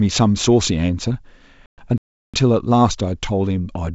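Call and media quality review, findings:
Packet loss on the ADPCM call, 1.66–1.79 s. Hard-edged 120 ms silent hole, roughly seven packets. Decoder predictor and step size drift from the sender's, so speech re-enters unsettled for tens of milliseconds.

Playback stall, 1.98–2.34 s. Sound halts mid-flow for 358 ms, then resumes. Likely the player's buffer ran dry or its output thread blocked. The surrounding G.722 wideband audio stays clear.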